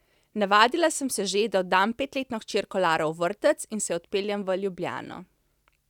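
The likely cause is a couple of dropped samples, a tiny gap of a fraction of a millisecond that makes the waveform jump abruptly. In this speech clip that jump is heard as a single sharp click at 0.64 s and again at 4.31 s.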